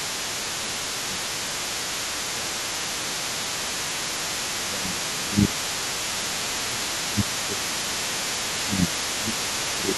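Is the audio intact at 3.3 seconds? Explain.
No. At 3.3 s the talker's speech is caught in speech suppressed in double talk, which runs from 3.0 to 3.76 s. The voice dips by roughly 15 dB, likely because the echo canceller could not tell its own talker from the loudspeaker echo and turned both down. On a waveform the envelope sags there. The other side's voice leaking through is also present, faint at about 15 dB below the speech across the whole clip. It is most likely remote audio from a loudspeaker that the echo canceller left in the microphone signal. A spectrogram would show a weaker second harmonic pattern running underneath, not lined up with the main voice's harmonics.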